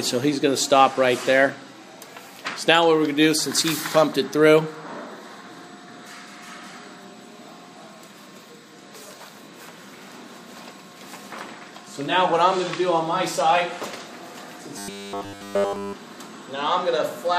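From 14.78 to 15.93 s, robotic sound from repeated short buffers: a rigid 100 Hz metallic buzz, likely from 10 ms chunks repeated throughout, showing as evenly spaced harmonic stripes.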